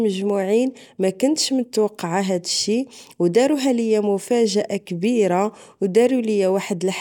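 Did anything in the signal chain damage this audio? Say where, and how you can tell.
No, nothing in the chain audibly damaged this speech recording at any stage.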